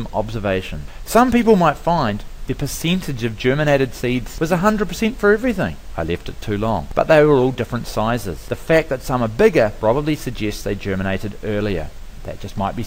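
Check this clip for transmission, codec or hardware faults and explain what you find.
Nothing here points to a transmission, codec or hardware problem; the audio just runs along steadily with no faults to report.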